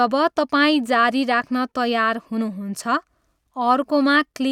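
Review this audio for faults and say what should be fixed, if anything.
Nothing here needs fixing; no faults were heard.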